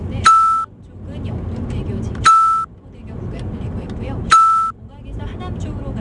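4-bit ADPCM compression runs throughout: gritty hiss riding every loud moment, smeared attacks, and nothing above 10.7 kHz, which fits a rate near 89 kbps.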